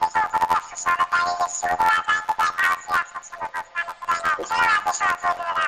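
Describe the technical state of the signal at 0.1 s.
At 0.1 s the signal shows planar audio read as interleaved, a fault that runs through the whole clip. Each block of about 11.61 ms, which fits 512-sample blocks, stores all left samples and then all right, but is played as alternating pairs, so each half runs at double speed. With blocks this short, the sound becomes a robotic buzz at 86.1 Hz rather than a clean octave jump. Unlike a sample-rate mismatch, the overall pace stays correct.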